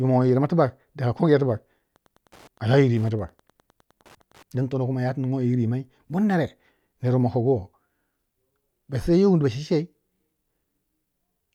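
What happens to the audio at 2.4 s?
Wi-Fi interference runs from 1.93 to 4.43 s, covering 2.4 s. A nearby Wi-Fi radio's beacon, sent every 102.4 ms, is rectified by the audio circuit, producing a steady ticking about ten times a second, roughly 35 dB below the speech.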